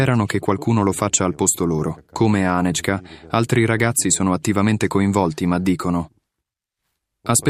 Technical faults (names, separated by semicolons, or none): none